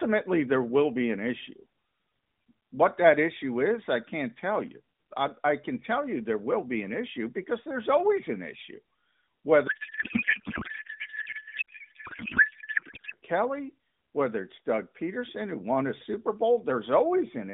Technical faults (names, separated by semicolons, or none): codec payload misread